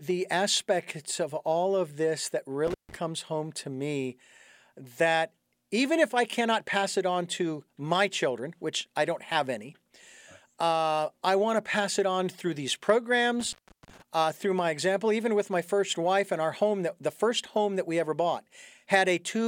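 Intermittent contact at 2.67 s, right after "all of this that", and 13.40 s, before "uh through my example": a loose connection opens, leaving crackly dropouts of about 150 ms and 370 ms.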